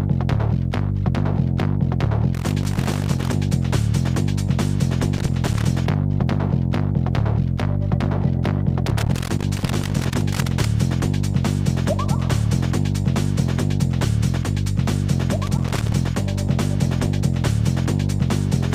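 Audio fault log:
2.34–3.33 s, 5.14–5.65 s, 8.87–10.65 s and 15.46–15.93 s, loose connector crackle: four irregular bursts of scratchy crackle break up the audio, the longest lasting nearly 1.8 s. A worn or dirty contact is flickering between touching and not touching, so the signal keeps cutting in and out, and any DC on the line jumps with each break to add sharp pops.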